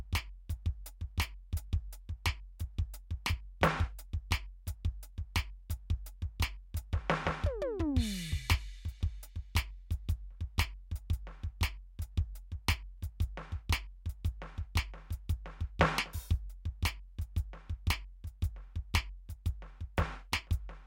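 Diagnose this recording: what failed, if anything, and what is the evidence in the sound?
Nothing in the signal chain of this music recording shows a failure: the level, timing and frequency content stay continuous and consistent throughout, with no audible break, distortion or loss attributable to any stage.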